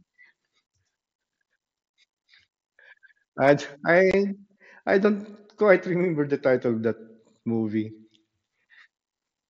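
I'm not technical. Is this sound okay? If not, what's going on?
No. At about 4.11 to 4.14 seconds the speech briefly drops out, a tiny hole with a sharp edge that can sound like a click. This is unconcealed Bluetooth headset packet loss: a few small chunks of sound travelling wirelessly between headset and phone went missing, and nothing filled the gap.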